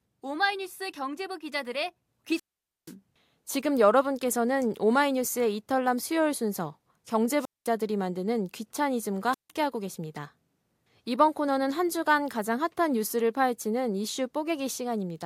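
At 2.32–2.94 s, 7.38–7.70 s and 9.32–9.50 s, wireless microphone squelch dropouts mute the speech for 480, 210 and 160 ms as the radio signal fades. A hiss surge before each gap distinguishes them from clean digital dropouts.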